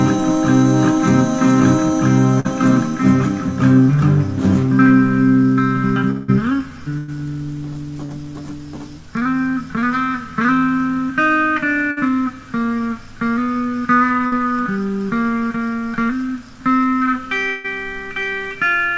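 The audio has passed through a call codec, and nothing reaches above 8 kHz, which fits G.722 at 64 kbps. Four bursts of packet loss occur, at 2.40–2.49 s, 6.98–7.10 s, 11.91–11.99 s and 14.27–14.35 s. In each, the last sound is stretched into a fading buzz or hiss, then the audio jumps ahead. Two longer gaps, at 6.10–6.30 s and 17.49–17.68 s, are likely long network dropouts. Each is bridged by a fading continuation of about 0.16 to 0.18 s, with no full silence before the audio resumes with material missing. A short concealed packet loss at 8.06–8.11 s leaves a brief smear lasting a few hundredths of a second.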